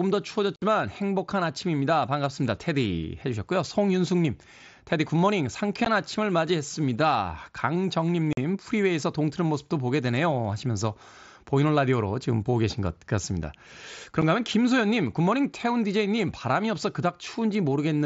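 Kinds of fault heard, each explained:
Unconcealed Bluetooth headset packet loss: speech packets between headset and phone go missing and silence fills their place, so four holes of 60, 15, 45 and 7.5 ms open with abrupt edges; concealed loss would instead smear or repeat sound across each gap.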